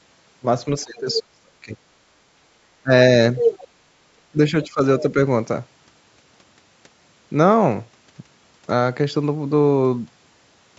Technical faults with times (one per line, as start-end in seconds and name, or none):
0.84-1.79 speech suppressed in double talk
0.96-1.19 other side's voice leaking through
2.83-2.91 speech suppressed in double talk
3.37-3.67 other side's voice leaking through
3.73-3.78 speech suppressed in double talk
4.32-4.81 speech suppressed in double talk